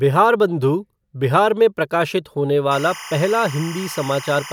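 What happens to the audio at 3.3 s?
At 3.3 s you're in the middle of some timecode bleed. It starts at about 2.71 s, right after "बिहार में प्रकाशित होने", and carries on to the end of the clip. Linear timecode from a nearby track or cable has leaked into the speech. It's a square wave flipping between roughly 1 kHz and 2 kHz, clocked at 25 frames per second, and it sits roughly 15 dB under the speech as a steady chirpy warble.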